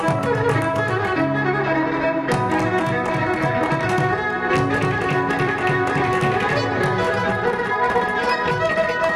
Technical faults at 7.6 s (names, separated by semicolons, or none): time-stretched section